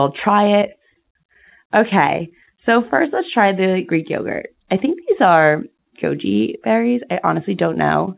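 Speech carried over a narrowband call path, its content stopping at 4 kHz in a way that fits G.711 mu-law coding at 64 kbps, with no technical faults audible anywhere in the signal.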